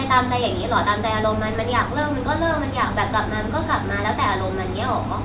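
No technical faults can be heard in this speech.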